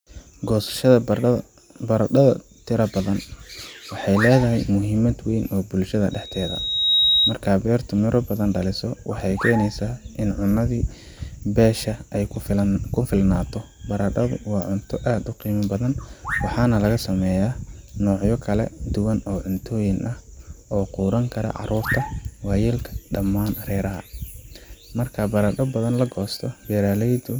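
A microphone picked up the loudspeaker it was feeding, and at one frequency the loop gain rose above one, producing loudspeaker feedback squeal from 6.11 to 7.38 s, between "muhiimad weyn oo bulshada" and "beertu miro badan dhaliso". A single tone at 3.8 kHz grows out of the speech over a bit under a second, climbing to about 5 dB above it as a piercing whistle, then stops.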